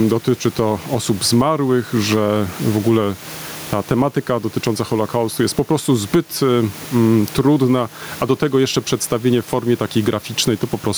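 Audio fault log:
throughout gain pumping: background swells around 15 dB in pauses and ducks under loud speech, likely excessive gain into a fast limiter; unlike gating, it never falls silent.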